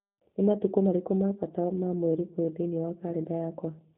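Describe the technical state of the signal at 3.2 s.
At 3.2 s the speech sounds band-limited, slightly rough and synthetic, typical of G.729 coding across the clip: everything above 4 kHz is gone, consistent with an 8 kbit/s codec rebuilding the voice from a filter, pitch predictor and sparse pulses.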